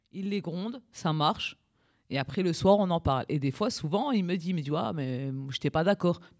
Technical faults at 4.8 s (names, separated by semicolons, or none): none